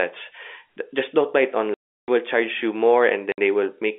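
At 1.74 s the speech drops into a dead hole that lasts until 2.08 s. This is packet loss filled with silence. The receiver got nothing for 340 ms and played silence instead. The gap starts and ends abruptly. A shorter hole follows at 3.32 s, lasting 60 ms to 3.38 s. Both lengths fit 20 ms packets. The band-limited G.711 telephone sound runs around both gaps.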